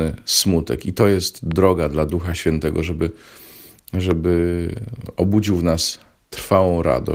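A sudden voltage step, likely from a plug, switch, static discharge or driver glitch, is added to the signal twice, producing a loud pop each time. The first, from 1.51 to 1.53 s, peaks about 5 dB above the speech; the second, from 4.11 to 4.13 s, is louder at about 10 dB above it. Each is a single sharp click-thump lasting about 20 ms, sitting on top of the speech, which carries on underneath.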